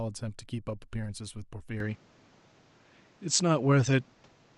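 At 1.80 s the input likely switched to a poorer device; the speech, unbroken, loses everything above 8.2 kHz, shifts level and gains faint noise.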